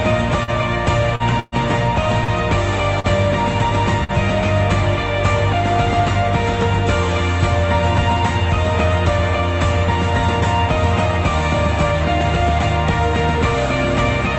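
Short concealed packet loss hits at 0.43, 1.15, 2.24 and 3.00 s. Each time about 40 ms went missing. The gap was filled by extending the previous sound, leaving a brief smear or wobble. A burst of packet loss at 1.40 to 1.55 s drops about 120 ms. The held sound buzzes or hisses, fades, then the audio resumes further on. A shorter burst at 4.04 to 4.12 s loses about 40 ms the same way. The Opus call path limits the band to about 8 kHz.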